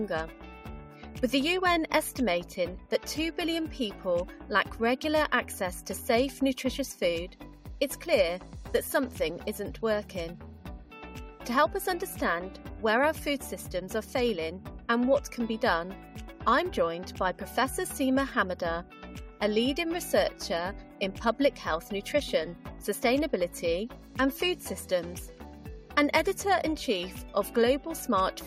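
Nothing technical gets in the way here; the audio runs along without any dropouts, glitches or other faults to point to.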